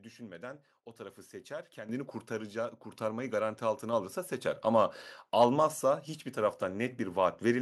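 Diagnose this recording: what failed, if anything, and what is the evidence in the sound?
The failure sits in call processing: the microphone volume stepped up twice, at 1.89 s by about 9 dB and at 2.91 s by about 5 dB. Both the speech and the background noise jump together and stay louder. The software judged the input too quiet and raised the device's input gain in single steps. On a waveform the envelope widens abruptly at each time. On a spectrogram the whole band, noise floor included, brightens at once.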